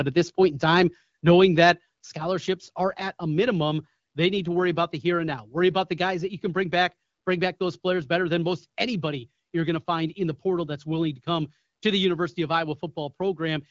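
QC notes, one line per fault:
2.04 s, microphone volume stepped down: speech and background both drop by about 5 dB at one instant and stay at the lower level. This is likely the call software lowering the microphone's input volume in a single step rather than fading it.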